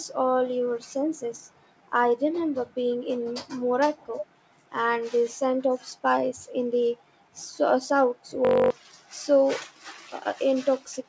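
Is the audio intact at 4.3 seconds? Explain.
No. An echo leak runs from 4.18 to 4.27 s, ending just before 4.3 s. A brief delayed copy of the speech returns about 0.3 s after the original, roughly 10 dB quieter. It sounds like a faint scrap trailing the speech. The likely cause is a far end playing the call on a loudspeaker, where its echo canceller failed to remove everything its microphone captured and sent it back.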